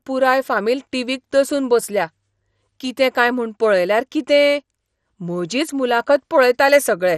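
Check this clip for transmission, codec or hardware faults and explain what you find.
One codec fault runs through the whole speech clip: MP2 compression is the likely cause of a dull, gurgling quality with nothing above 14.3 kHz. Too few bits, fitting about 64 kbps, leave upper sub-bands switched off or flickering and the rest coarsely quantised, giving granular distortion.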